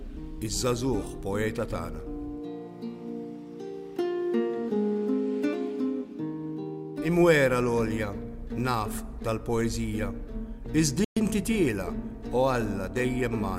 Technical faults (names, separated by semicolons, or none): playback stall